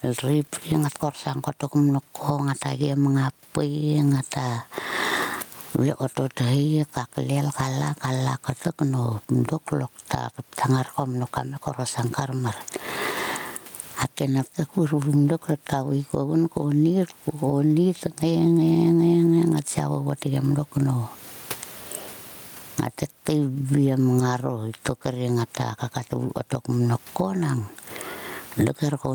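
Speech clip with gain pumping all the way through: the room noise is normally about 42 dB under the voice, and the gain swings by roughly 25 dB, likely from gain set way too high and a fast limiter clamping down.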